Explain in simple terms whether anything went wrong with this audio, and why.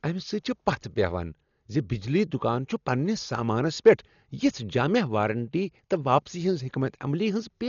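Throughout the recording the speech sounds dull and muffled, with nothing above about 7 kHz, and a rough, fluttering noise clings to it. This is heavy Dolby Digital compression, likely squeezed too hard, so detail was discarded and replaced with filler noise.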